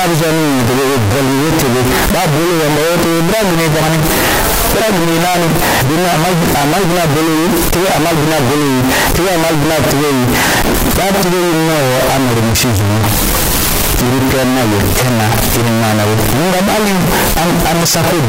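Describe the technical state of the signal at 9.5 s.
At 9.5 s the speech has very loud, harsh distortion. This is not a local event. It runs through the whole clip. The likely cause is signed and unsigned mixed up in the 16-bit samples. Reading them the wrong way flips the top bit. Every zero crossing then leaps from one end of the range to the other. Quiet moments come out as loud as the rest.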